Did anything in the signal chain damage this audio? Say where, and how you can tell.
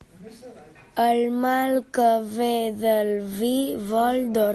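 No, nothing in the chain damaged this speech; it went over a WebRTC call path, and the band ending near 12 kHz along with the usual coding texture fits an Opus codec at about 32 kbps working as designed.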